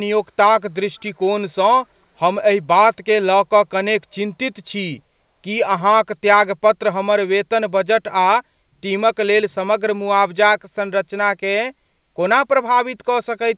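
At 1.0 to 1.04 s a very faint scrap of the speech returns 448 ms late. This is an echo leak, likely a far-end loudspeaker's echo canceller letting a fragment through. Unlike room reverberation, it is a distinct delayed repeat rather than a smear.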